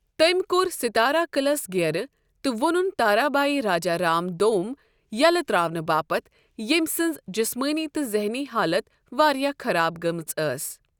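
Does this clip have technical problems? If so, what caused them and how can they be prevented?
No, nothing in this speech recording stands out as a technical problem, so there's nothing here that needs fixing or guarding against.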